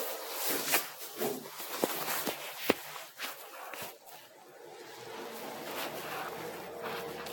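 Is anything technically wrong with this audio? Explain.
Yes. Generation loss runs through the whole clip. The sound is swirly and smeared, with a hollow, gappy tone. Transients lose their edge and blur into what follows. Nothing is present above 17.3 kHz. The likely cause is repeated lossy coding: decoded and re-encoded about seven times, in a way that fits Vorbis near 66 kbit/s. Each pass quantised on a shifted frame grid, so noise and spectral holes built up beyond what one encode would leave.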